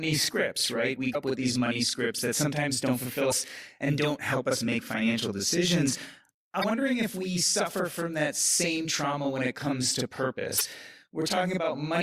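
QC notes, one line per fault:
Throughout: channel delay (doubling). One channel runs 40 ms late and both get summed to mono, so everything has a tight slap-back doubling on it.
1.11–1.16 s, 3.28–3.33 s (after "that sometimes don't fulfill", before "and don't help us"), 6.60–6.64 s (before "if we suffer from"), 10.57–10.61 s (after "when it comes to"): damaged data in a compressed stream. The decoder hits bad frames, loses sync and hunts for the next header, giving a short glitch each time.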